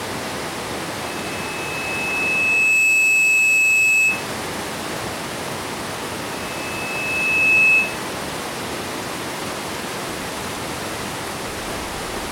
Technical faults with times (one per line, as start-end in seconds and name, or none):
1.00-4.28 loudspeaker feedback squeal
6.32-8.02 loudspeaker feedback squeal